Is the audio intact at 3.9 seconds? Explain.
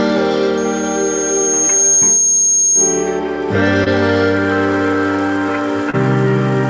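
No, there's a short concealed packet loss right around there, running from about 3.84 to 3.88 s. Roughly 20 ms of audio never made it to the decoder in time, so the receiver patched the gap by extending whatever sound came just before, then crossfaded back into the real signal. What you hear is a quick smear or wobble.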